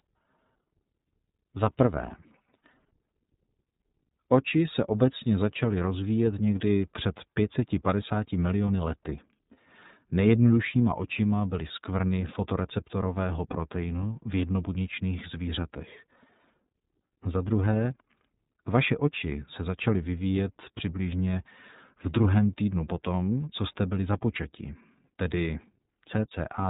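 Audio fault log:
throughout, iLBC codec. The speech is narrowband, with nothing above 3.8 kHz. It stays clear but sounds plainly rough and slightly synthetic. Each block of sound is coded on its own, without help from the one before. The texture fits 30 ms frames at roughly 13 kbps.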